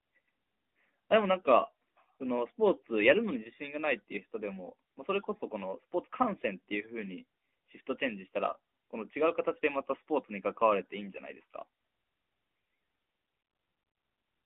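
Nothing here counts as a technical fault: it's just speech carried over an AMR narrowband mobile link at 12.2 kbps, with the usual phone-line band of roughly 250 Hz to 3.6 kHz.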